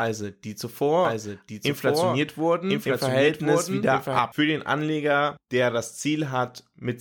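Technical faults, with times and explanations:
1.05–4.19 s, doubled audio track: a second, slower capture path or a misaligned edit likely mixed the speech in twice, so a full-band copy trails about a second behind at roughly the original level, with no decay or room colour, and starts and stops abruptly.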